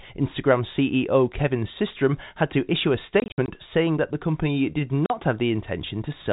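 Packet loss filled with silence chops the speech from 3.2 to 3.48 s, after "had to issue a": 140 ms of gaps scattered over 280 ms, the longest run 60 ms, which fits 20 ms packets. A 40 ms hole follows "that the company did" at 5.06 s. Each hole has hard edges.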